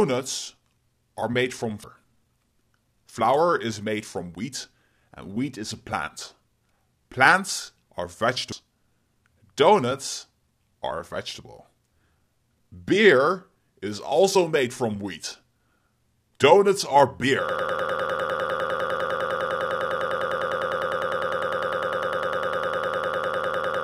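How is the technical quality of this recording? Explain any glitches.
The recording has clear transport faults: two brief decoding glitches and a stall loop that lasts to the end.

At 1.84 s and 8.52 s there is damaged data in the compressed stream. Corrupted bytes stop the decoder from reading those frames, so it drops sync and searches for the next valid header. Each event sounds like a short chirp or blip.

From 17.49 s to the end there is a broken-record loop. A 0.1 s fragment repeats exactly, back to back, 63 times, giving a rapid stutter. The likely cause is a stalled player or stream resending its last buffered fragment, so the audio that should have followed is lost.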